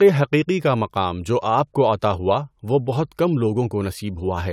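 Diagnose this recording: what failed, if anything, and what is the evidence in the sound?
Nothing failed: no stage from capture through playback leaves an audible fault in the speech, so there is no evidence to trace to any stage.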